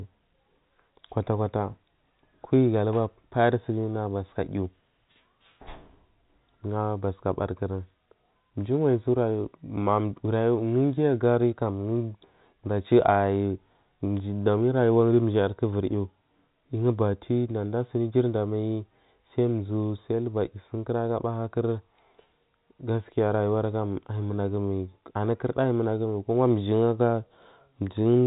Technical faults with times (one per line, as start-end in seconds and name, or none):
none